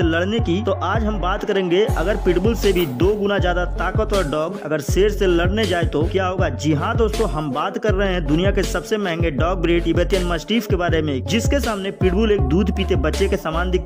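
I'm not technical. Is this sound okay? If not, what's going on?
Yes, the recording is in good technical shape, with nothing in it that needs fixing.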